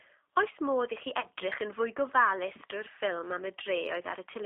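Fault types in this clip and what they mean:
G.729 codec: A low-rate speech codec that rebuilds the signal from a vocal tract filter, a pitch predictor and a few pulses per 5 ms subframe rather than coding the waveform itself. Here the sound sits in a narrow line band of roughly 300 Hz to 3.7 kHz, with nothing audible above 4 kHz, and the damage is plainly audible as a rough, slightly synthetic texture throughout. This is consistent with an 8 kbit/s G.729A stream.
VoIP packet loss concealed by the speech codec: When packets fail to arrive, the decoder fills the gap by extending its last pitch and filter state with falling gain. Because each frame depends on the one before, the error carries forward after real data resumes. In this clip a gap of about 30 ms, consistent with a single lost packet, produces a brief fading stretch from 1.20 s to 1.26 s.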